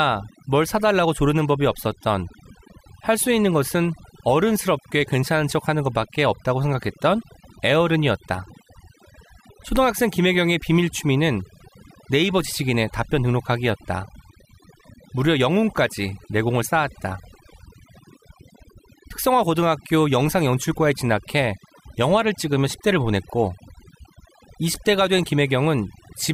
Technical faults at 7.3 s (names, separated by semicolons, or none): overdone noise removal